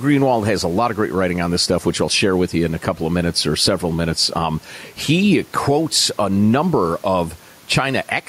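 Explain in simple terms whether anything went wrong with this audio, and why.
Gain pumping runs through the whole speech recording, likely from a fast limiter fighting too-high gain, unlike the room noise, which is normal.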